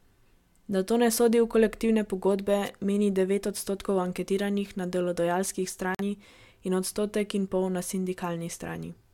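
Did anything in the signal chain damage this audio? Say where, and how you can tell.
Yes. The radio link of an analogue FM wireless microphone faded briefly, probably as reflected signals cancelled at the receiver, so receiver noise rose above the wanted signal. That is heard as a short swish of static from 2.64 to 2.69 s, right after "sodi v kolektivne pogodbe" and before "meni devet odstotkov anketiranih." The burst lasts about 50 ms and sits over the speech, which puts the damage at the wireless transmission stage rather than in the wiring or converter.

At the codec stage, a corrupt frame was muted. Flipped bits made the decoder reject the damaged compressed data, and the player substituted silence. The result is an abrupt hole from 5.95 to 6.01 s, just after "odstotkov anketiranih na delodajalski." Its length of about 60 ms fits two lost frames. The speech resumes on schedule after the gap, with no shift in timing, which points to decoder concealment rather than a network stall or buffer underrun.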